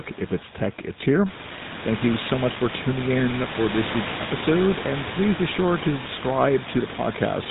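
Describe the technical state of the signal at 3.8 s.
At 3.8 s the speech is passing through the GSM full-rate codec, which affects the whole clip rather than just this moment. The coder models the vocal tract and drives it with a sparse train of regularly spaced pulses, discarding two of every three excitation samples, at a rate that fits the 13 kbps full-rate scheme. Nothing above 4 kHz survives, and the voice takes on a plainly audible buzzy, gravelly roughness. The room noise, which rose by about 14 dB at around 1.5 s, sits roughly 11 dB under the speech.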